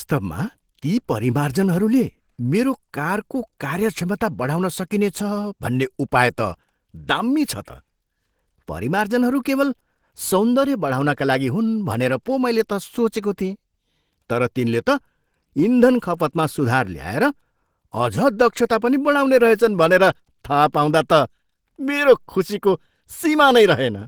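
From start to finish the speech carries plainly audible Opus compression, likely from encoding at a low bitrate around 16 kbps in the codec's hybrid speech mode, leaving it hoarse, grainy and somewhat muffled. A spectrogram shows rough, noise-filled upper bands extending to about 20.2 kHz.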